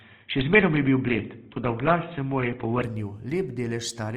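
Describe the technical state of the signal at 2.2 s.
At 2.2 s the speech is still inside a stretch, from 0.0 to 2.82 s, that sounds like it is coming from a poorer microphone, most likely an input switched to a poorer device. Nothing passes above about 3.8 kHz, so the voice sounds dull and boxy, with a faint steady noise floor well beneath it. On a spectrogram the energy stops at a flat ceiling near 3.8 kHz. At 2.82 s it jumps back to full height with no gap, and the waveform there changes level by a few decibels.

Across the whole clip, including 2.2 s, there is plainly audible Opus compression running in its CELT music mode. Bands that run short of bits are filled with folded or noise-like content rather than left empty, so the voice has a grainy, rough texture instead of swirling. The sound fits a low bitrate of around 24 kbps, likely the cause. On a spectrogram the upper bands look speckled and noise-filled rather than cleanly harmonic.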